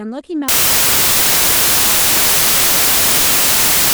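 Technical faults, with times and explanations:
0.48 s to the end: samples built from the wrong bytes. The bytes get misassembled, so the jittery low bits dominate and the speech turns into loud, harsh noise, close to white on the louder sounds.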